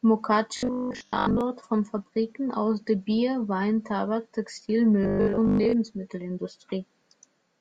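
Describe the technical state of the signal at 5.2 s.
At 5.2 s the speech becomes a rigid metallic buzz at 50 Hz from 5.03 to 5.73 s: robotic sound from repeated short buffers, likely from 20 ms chunks looping over most of the audio.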